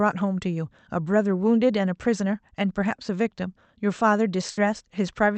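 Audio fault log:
4.51 to 4.60 s, burst of packet loss: The sound breaks into a held buzz or fading hiss for about 60 ms. The receiver stretched the last audio it had and faded it. Then the audio jumps ahead, about 60 ms lost. The call path cuts off the highs above roughly 8 kHz.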